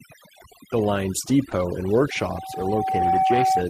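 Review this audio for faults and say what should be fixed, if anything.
Overdone noise removal runs through the whole speech clip. The suppressor is set aggressive enough that individual frequency bands are pulled down or shut off whenever they sit near its noise estimate, and the quieter components of the speech get cut along with the noise. The result is a background that drops and breaks up into twinkling artefacts. Prevention: reduce the suppression depth and let a small residual noise floor through.

Short concealed packet loss occurs from 1.49 to 1.53 s. About 20 ms of audio missed the decoder, and the receiver bridged the first 14 ms by extending the preceding signal before crossfading back into real audio. It registers as a brief smear or wobble, and any short consonant in that window can disappear. Prevention: improve network stability and give the jitter buffer enough depth to absorb late arrivals.

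A lost packet rebuilt from error correction overlaps it, covering 1.51 to 1.53 s. One 20 ms packet was recovered from the low-bitrate redundant copy carried in the next packet, which avoids a gap but leaves that frame rougher and noisier than its neighbours. Prevention: address the underlying packet loss so the decoder can play the full-rate frames.

Loudspeaker feedback squeal begins at 2.11 s and continues to 3.69 s. The microphone is picking up the loudspeaker it drives, and at 761 Hz the loop gain exceeds unity, so that tone rises on its own over roughly a second until it sits about 5 dB above the speech. It is heard as a steady, swelling squeal. Prevention: lower the monitor gain, separate the microphone from the speaker, or use headphones or acoustic echo cancellation.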